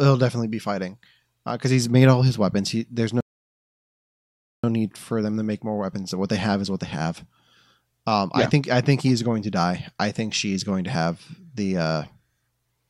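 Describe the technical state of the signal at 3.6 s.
At 3.6 s the speech is halted by a rebuffering stall. It runs from 3.21 s to 4.64 s. The player ran out of downloaded audio and waited for more. The sound drops to silence, then resumes exactly where it stopped. Nothing is lost, but about 1.43 s is added.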